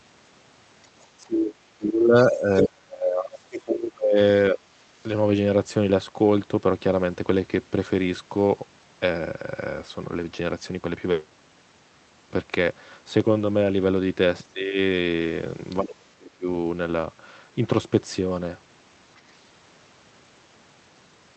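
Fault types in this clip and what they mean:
Other side's voice leaking through: residual loudspeaker echo likely slipped past the echo canceller, so brief scraps of a second voice surface, one nearly as loud as the talker.
Speech suppressed in double talk: with both sides talking at once, the echo canceller likely turned everything down, so the speech dips by up to about 30 dB, longest from 1.18 to 4.18 s.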